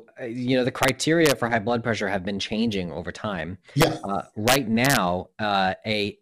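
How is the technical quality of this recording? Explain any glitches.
The recording is marred by integer overflow, heard four times in this speech. Loud peaks pushed past the integer limit and wrapped to the opposite sign instead of clipping, producing violent cracks sharper than ordinary distortion. This happens at 0.83 to 0.89 s and 1.26 to 1.31 s, both between "uh you know the" and "for high blood pressure," at 3.81 to 3.84 s after "been changing over time," and across a longer stretch from 4.48 to 4.97 s. The peaks exceeded the limit by only about 2 to 3 dB.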